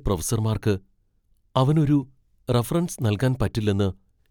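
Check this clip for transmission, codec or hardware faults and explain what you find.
No transmission, codec or hardware faults are audible anywhere in this speech clip.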